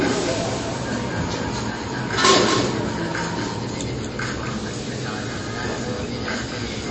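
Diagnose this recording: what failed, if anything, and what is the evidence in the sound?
Two faults run through the whole clip. The first is a doubled audio track at the capture or routing stage. A second, full-band copy of the sound trails the original by around a fifth of a second, at roughly 5 dB below it. Every event is followed by a clean, dry repeat with no decay or room colouring. That dryness rules out reverberation. The likely cause is the same signal reaching the mix twice, once through a slower path.

The second fault is MP3 compression damage at the codec stage, and it is plainly audible across the clip. There is nothing above 8.3 kHz, a hard treble cut-off of the kind an encoder imposes when bits run short. The remaining spectrum has a watery, swirling texture because weak frequency components drop in and out between frames. Transients also sound smeared. This level of damage points to a low bitrate, and the likely setting is around 32 kbps.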